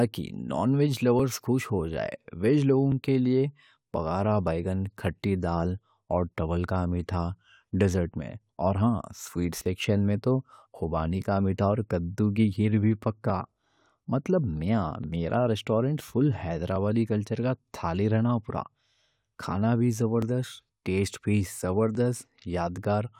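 From 1.2 s to 21.95 s, a click recurs every 1.73 s in speech: clock drift buffer slips, likely from unsynchronised clocks roughly 700 ppm apart, each dropping or repeating around 70 samples. Each appears as a thin vertical spectrogram line and a waveform discontinuity.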